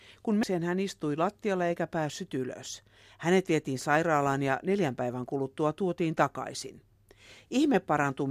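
Right at 0.43 to 0.46 s, just before "hän istui lattialla eikä", there's a short blip. That's damaged data in the compressed stream: bad bytes threw the decoder off its frame sync, so it garbled that bit and jumped ahead to the next clean header.

From 2.09 s to the end, just after "hän istui lattialla eikä", the speech picks up a fine hiss and roughness that swells on louder, brighter sounds and drops away in the gaps. That's sample clock jitter. The converter's clock wobbles by something under a microsecond, so samples land slightly early or late, and the resulting error sits roughly 50 dB below the signal.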